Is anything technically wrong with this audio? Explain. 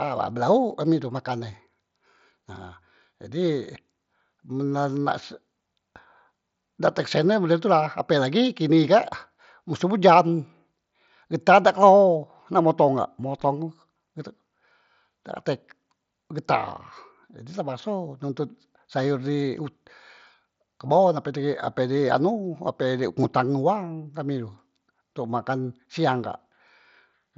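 No, nothing is technically wrong with this audio.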